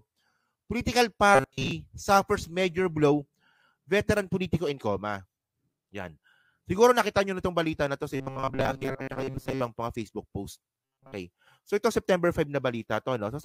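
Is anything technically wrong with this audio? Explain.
Yes. Robotic sound from repeated short buffers occurs at 1.35–1.71 s, 8.15–9.61 s and 10.85–11.15 s. It is likely caused by audio arriving late: a fragment of about 7.5 ms loops in place of most of the sound, forcing a rigid, metallic 134 Hz buzz.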